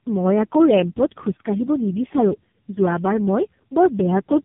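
Throughout, the speech suffers tandem speech coding: the roughness points to about three low-rate speech coders in a row, such as GSM full rate, G.723.1 and AMR-NB, each re-encoding the previous coder's degraded output. It sounds rough, muffled and warbly, with nothing above 3.6 kHz.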